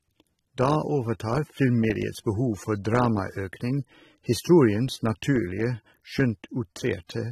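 From start to finish the speech sounds dull and smeared, with nothing above about 13.8 kHz and a warbly, fizzy edge on sibilants. That's likely AAC compression, with the coder dropping the top end and thinning the spectrum, which points to a low bitrate around 27 kbps.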